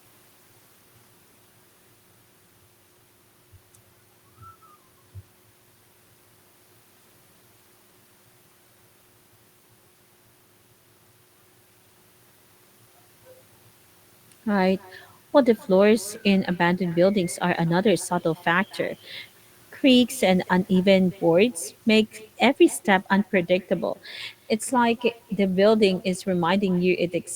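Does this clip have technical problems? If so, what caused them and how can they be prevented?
Yes: echo with no canceller runs throughout, a faint copy about 27 dB down arriving roughly a fifth of a second late, seen as smeared ghost bands trailing each syllable. Enabling acoustic echo cancellation or using headphones at the far end prevents it.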